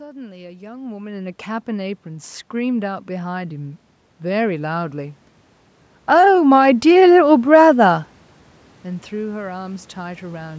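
From 1.65 s to 5.23 s, automatic gain rising can be heard. The gain control judged the input too quiet and raised its level slowly. The voice and the room noise swell together by about 7 dB over those three and a half seconds.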